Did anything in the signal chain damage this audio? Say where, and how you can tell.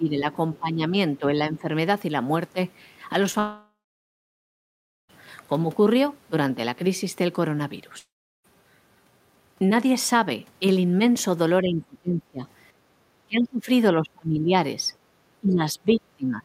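Yes. The damage comes from two stages: call processing, in the echo canceller, and the network path.

Speech suppressed in double talk shows up as the talker's level sinking at 0.00–0.28 s, 0.59–0.92 s, 1.19–1.69 s, 11.62–12.45 s, 13.26–13.68 s, 13.99–14.54 s and 15.41 s to the end. The dips run from about 10 dB early on to about 30 dB near 13–14 s. The likely cause is the echo canceller failing to separate the near talker from the far-end echo and attenuating both.

A short concealed packet loss sits at 3.31–3.35 s. About 20 ms of audio was missing, and the receiver filled it by extending the preceding sound, so it comes across as a brief smear rather than a gap. The fill is too short to decay into hiss or silence, which separates it from the dropouts that follow. It lands just before the first long outage.

A long network dropout follows at 3.39–5.11 s, with about 1.7 s lost. A second one at 7.99–8.46 s loses about 0.46 s. 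Each opens with a synthetic continuation of the last sound that fades out, leaving roughly 1.35 s and 0.37 s of silence respectively. Audio then resumes with the intervening material gone, which is likely caused by packets not arriving. The fade into silence is what separates these from brief concealment, and the lost content is what separates them from echo-canceller suppression.

Background gated by the echo canceller appears at 12.73–12.98 s. The room sound drops by about 8 dB for roughly a fifth of a second and then returns when the canceller releases. This differs from the double-talk suppression around it because the ambient noise floor is what dips here, during far-end playback, rather than the talker being squeezed while both sides speak.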